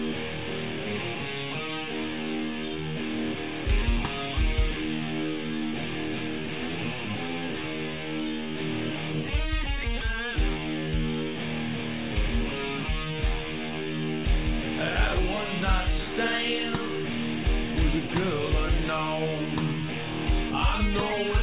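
No technical faults are audible.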